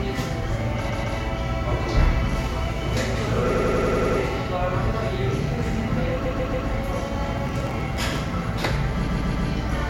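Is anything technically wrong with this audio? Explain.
Yes. Repeated frames occur at 0.88–1.16 s, 3.53–4.18 s, 6.25–6.67 s and 9.06–9.48 s. A short block of compressed audio was sent again and decoded more than once. The 139 ms block replays two or three extra times, and a 93 ms block replays seven times near 3.5 s. Each repeat is a stutter, and the clip gets longer by up to 0.65 s per event.

Processor overload crackle runs from 7.46 to 8.21 s. The processor missed a few dozen deadlines for very small buffers, around a millisecond or two each, and each was skipped. The resulting tiny hard-edged gaps merge into a gritty crackling burst over the sound.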